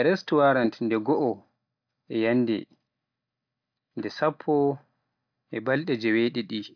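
No technical faults are audible.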